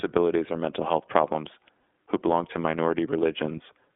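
Throughout the clip the speech carries plainly audible iLBC codec damage. The band is confined to roughly 250 Hz to 3.5 kHz, and voiced sounds take on a slightly rough, synthetic texture as the excitation is coded frame by frame, consistent with iLBC's 13.33 kbps, 30 ms mode.

From 1.79 to 1.82 s, between "or mental health problems" and "who belong to", a lost iLBC frame is concealed by repeating the last pitch cycle with added noise. This produces a brief held, buzzy vowel-like sound about 30 ms long, fitting a single missing frame. Clean decoding resumes immediately afterwards.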